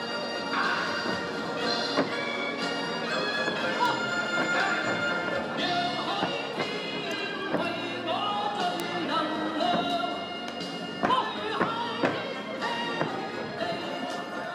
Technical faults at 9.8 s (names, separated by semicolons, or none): none